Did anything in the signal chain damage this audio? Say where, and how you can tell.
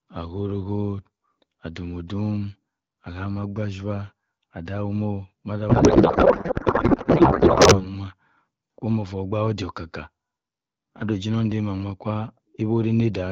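Yes. Codec payload misread, 5.69 to 7.89 s: the speech becomes garbled warbling noise barely tracking it, which fits octet-aligned AMR-WB frames decoded as bandwidth-efficient, misplacing every field.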